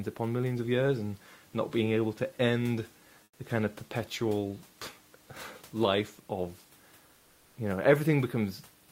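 A likely transmission pause at 3.23–3.39 s, after "being able to end", brings comfort noise in place of the background: steady, featureless hiss about 8 dB quieter.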